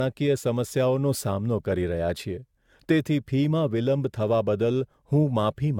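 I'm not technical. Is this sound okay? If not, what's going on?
No. From start to finish the speech sounds swirly and hollow, as if heard through a watery filter, and the starts of sounds are blurred instead of crisp. The very top sparkle is also missing, with nothing above about 17 kHz. This is generation loss, likely from the recording being compressed and re-saved around seven times, each pass adding a little more damage, like a photocopy of a photocopy.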